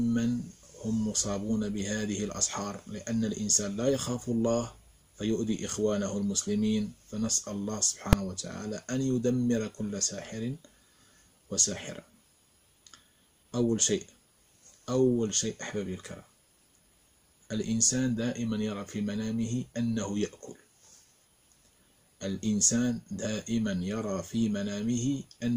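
A calculation in the processing chain produced infinite or invalid numbers, which were clamped to full scale for one short block, consistent with a 128-sample block of about 2.67 ms. At 8.13 s the audio is hit by a single loud bang, with the output pinned at one extreme value, far beyond the audio's peaks.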